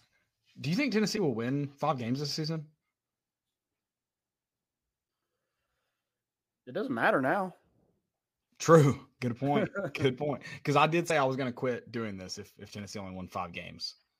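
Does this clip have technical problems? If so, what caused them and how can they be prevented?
Yes: damaged data in a compressed stream at 1.14–1.19 s and 11.06–11.12 s, where corrupt bytes make the decoder misread frames and resynchronise. Prevent it by checksumming files and using reliable, error-checked transport.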